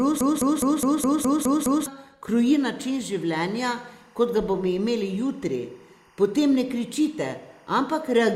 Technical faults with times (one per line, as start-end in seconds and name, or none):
0.00-1.86 broken-record loop
2.27-8.35 timecode bleed
7.01-7.07 corrupt frame decoded